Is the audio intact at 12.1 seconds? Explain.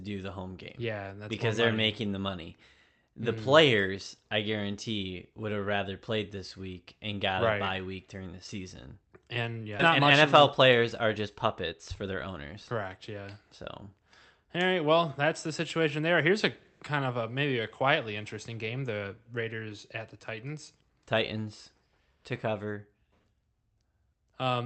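No. From 9.89 to 12.97 s the speech rushes about 9% faster at unchanged pitch: a jitter buffer speed-up, trimming pitch-period slices to shed about a third of a second of backlog.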